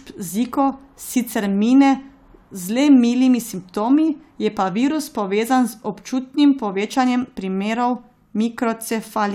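No technical faults are audible.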